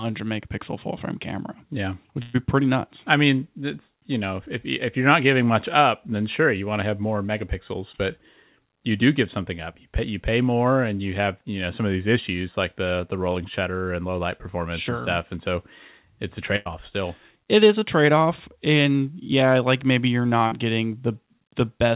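At 2.22 to 2.36 s, just before "pretty nuts I mean", a burst of packet loss drops about 120 ms of audio. The receiver bridges the hole by extending the last sound it had and fading it down, so a held, dimming continuation replaces the real material. The audio then picks up further along with that stretch gone. The same happens at 16.56 to 16.67 s, right after "so it's a", where about 100 ms is lost and papered over the same way.

Two short concealed packet losses follow. At 17.79 to 17.83 s, just before "trade off and yeah", about 20 ms failed to arrive in time. At 20.47 to 20.53 s, about 40 ms went missing. In each case the decoder invents a brief continuation of the preceding sound and crossfades back into the real signal. This leaves a quick smear or wobble where a short sound may simply disappear. Throughout, the call path's band limit leaves nothing above 4 kHz, which fits G.711 mu-law coding.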